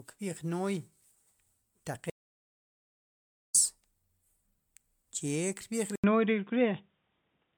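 Throughout the speech there is a swirly, hollow smear, and consonant onsets sound blurred in a way a single MP3 pass at 128 kbit/s would not produce. That points to generation loss, likely from the audio being decoded and re-encoded as MP3 about four times. Each pass requantised on a shifted frame grid, so the holes and noise stacked up. The spectrum still reaches about 20.1 kHz, so the damage is not bandwidth loss as a low bitrate would cause. It is accumulated artefacts across a full-width band.

From 2.1 s to 3.55 s the sound stops for about 1.45 s. This is an audio dropout to silence, likely an input link or device dropping out while the recorder kept writing silence. The gap is silent with no room tone under it. That sets it apart from a natural pause or a noise gate, which would leave some background or fade in.

At 5.96 s there is an input switch to a poorer device, likely a change of microphone or a move to a headset call profile. 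An 80 ms silence marks the switch. After it, the sound has nothing above 3.8 kHz, the level shifts by about 5 dB, and a new noise floor appears about 55 dB below the signal. This lasts to the end. An EQ change would dull the sound too, but it would not bring the gap, the new noise or the level jump.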